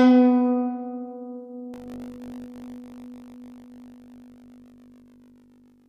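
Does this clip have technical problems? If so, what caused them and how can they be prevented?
Yes. From 1.72 s to the end of this music clip there's buffer tearing, a rattly, robotic 50 Hz buzz. The writer and the hardware reader of the ring buffer have drifted out of step, so they cross inside every period. A small slice of each buffer, under a tenth, plays audio from roughly 70 ms earlier, with hard joins on both sides. That fits periods of about 20 ms. Keeping the writer locked to the device's read position and recovering cleanly from any slip would prevent this.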